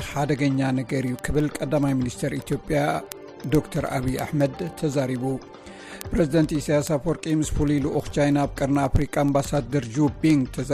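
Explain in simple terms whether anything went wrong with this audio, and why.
Word clock ticks run through almost the whole recording, from 0.12 s to 10.73 s: sharp clicks about twenty times a second. Two digital devices ran on slightly mismatched clocks, so each time they slipped apart, one sample was dropped or repeated.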